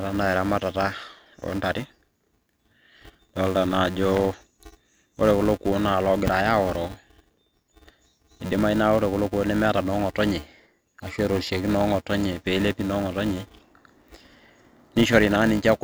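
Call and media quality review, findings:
Filter restarted on every block: filter state not carried across processing blocks, so each block starts from silence. Small onset transient at every boundary, heard throughout the speech as a steady 375 Hz buzz that rises and falls with speech level. Rate fits a 128-sample block at 48 kHz. Probable component: block-based EQ or filter stage in the media path.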